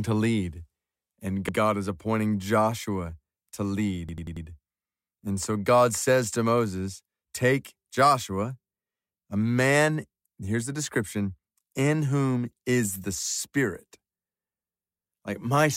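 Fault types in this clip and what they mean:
repeated buffer: new audio arrived late, so the output replayed its last 93 ms block, which fits a 4096-sample buffer. Near 1.49 s, before "is appointing", one piece sounds twice; from 4.09 to 4.46 s one sounds five times, a hard-joined stutter.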